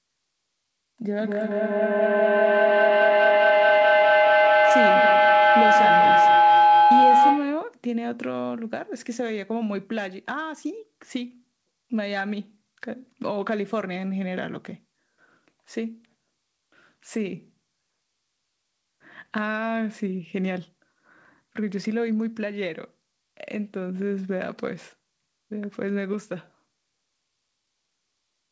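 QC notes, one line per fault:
1.17–7.75 s, feedback howl: a microphone-to-loudspeaker loop between two devices in the same room gained level on each pass. The repeats, roughly a fifth of a second apart, grew into a tone around 1 kHz that peaks about 10 dB above the speech.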